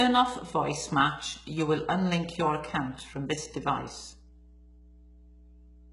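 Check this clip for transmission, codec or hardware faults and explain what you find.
Two faults run through the whole recording: a steady mains hum and heavy low-bitrate codec damage.

Mains hum: From start to finish a constant low drone sits under the speech, pitched at 60 Hz and roughly 25 dB below the speech level. It comes from the power line leaking into the audio path, through a ground loop or a nearby transformer inducing current in the wiring, so the hum follows the 60 Hz supply frequency.

HE-AAC compression: Throughout, the upper range of the speech sounds synthetic rather than natural. S sounds come out gritty and lispy, the brightness has a metallic sheen, and nothing is present above 11.1 kHz. The likely cause is HE-AAC coding at a very low rate; the heavy damage fits around 12 kbps. The codec keeps only the lower spectrum and fakes the treble by copying lower bands upward, so those harmonics no longer line up with the real ones.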